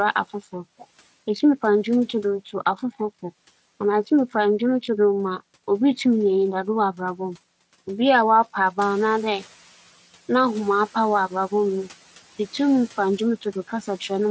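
From 8.78 to 9.55 s the noise suppressor is catching up: background noise jumps, passes through under-reduced, then sinks about 7 dB over 770 ms, one smooth settling rather than repeated pumping.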